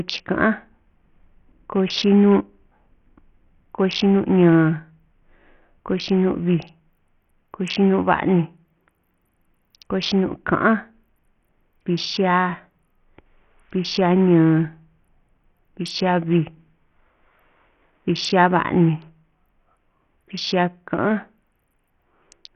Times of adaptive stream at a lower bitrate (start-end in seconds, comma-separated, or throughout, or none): none